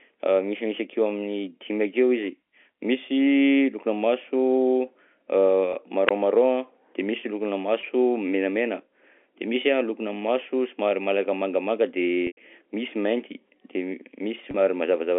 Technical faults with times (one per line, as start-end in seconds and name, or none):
5.73-5.75 packet loss with pitch repetition
6.07-6.11 wireless microphone squelch dropout
7.81-7.83 packet loss with pitch repetition
12.27-12.37 packet loss with pitch repetition
14.51-14.54 packet loss with pitch repetition